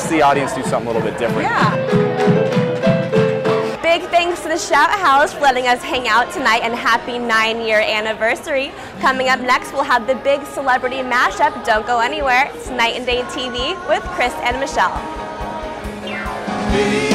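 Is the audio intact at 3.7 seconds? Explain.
No. Peaks at 3.7 seconds crackle, as throughout the clip: hard clipping, with about 8 dB of overdrive flattening the tops of a small share of samples.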